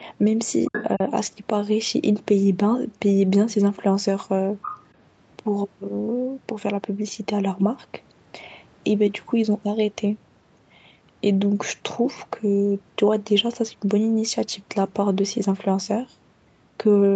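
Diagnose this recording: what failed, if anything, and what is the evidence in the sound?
Other side's voice leaking through appears twice, at 0.65 to 0.85 s and again at 4.62 to 4.79 s. In each, a second talker sits under the main speech, fairly close in level the first time and roughly 10 dB down the second. The likely cause is the call-processing stage: the far end played on a loudspeaker and the echo canceller left a residue in the microphone signal. A separate voice, rather than a hum or a copy of the talker, is what rules out analogue crosstalk or a feedback loop.

Speech suppressed in double talk shows as a brief dip from 0.96 to 1.01 s, about 50 ms long, with the talker's level falling by around 10 dB. It arrives right after the first leaked stretch, which points to the echo canceller likely treating the overlap as echo and attenuating everything. The sound dips rather than dropping to silence, and no repeated or smeared fragment follows it. 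That separates it from a network packet loss, and the band-limiting to 8 kHz from normal call processing is unaffected.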